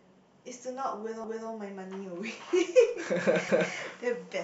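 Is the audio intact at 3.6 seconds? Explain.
No, 3.6 seconds falls right inside an overlapping chunks fault running from about 3.49 to 3.74 s. The speech looks like it was handled in 2-second chunks, and at this join the next chunk starts before the previous one has finished, so roughly 250 ms of audio gets played a second time. You hear it as a quick stutter, that little stretch of speech doubling back on itself before things carry on.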